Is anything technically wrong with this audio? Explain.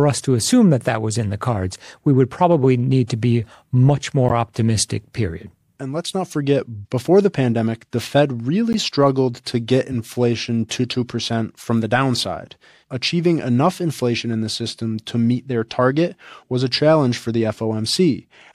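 Yes. A corrupt frame decoded at 4.29–4.31 s, between "need to be much" and "optimistic period", and again at 8.73–8.75 s, just before "struggled to get." Flipped bits across a couple of compressed frames were decoded anyway, scattering energy into wrong frequencies. The result is a brief blip, stronger the first time and softer the second.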